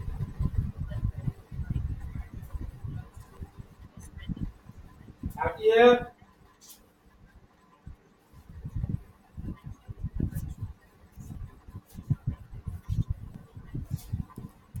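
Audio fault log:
3.37, 11.35, 13.35 s: overlap between stream segments. About 12 to 15 ms of speech vanishes at one-second segment joins, giving a tiny skip, not a silent dropout.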